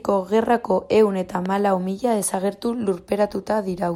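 At 1.46 to 1.48 s a single sharp pop cuts through the speech, a brief hard click with a little body to it, standing a few decibels above the surrounding level while the talking carries on underneath without a break. This is a loud pop, most likely from a sudden voltage step or spike entering the chain, such as a connector being disturbed, a switch, a static discharge or a driver glitch, which the following circuitry shaped into this short burst.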